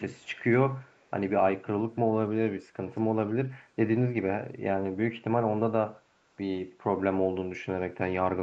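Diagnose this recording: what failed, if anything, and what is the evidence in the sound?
Call processing is the stage behind the first fault, an echo leak. At 0.15–0.39 s and again at 0.82–1.11 s, a very faint copy of the speech trails the original by about 0.31 s, sitting roughly 35 to 40 dB below it. The likely cause is a far-end loudspeaker whose echo canceller let residual pickup return down the line. A fixed delay of around 306–307 ms sets this apart from room reverberation, which would smear continuously rather than repeat as a discrete, consistently delayed copy.

The second fault is a Bluetooth SBC bit pool drop at the codec stage. From 1.78 to 4.60 s, and again from 7.75 s to the end, the treble dulls and a gritty, granular noise rides on the speech, clearing after the first span when quality returns. That pattern fits the link lowering its bit pool from about 28 to 12, near 96 kbps, starving the upper sub-bands and coarsening the rest. 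The call's normal 8 kHz ceiling is fixed throughout, whereas this degradation comes and goes with added grit.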